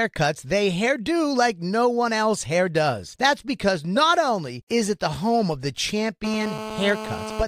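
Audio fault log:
6.24–7.43 s, GSM phone buzz: after "the home of the", a hard, raspy buzz at about 217 Hz, steady as during a call and sitting about 9 dB below the speech. Dense harmonics and a pulse rate unrelated to the signal set it apart from mains hum, which is smoother and sits at 50 or 60 Hz.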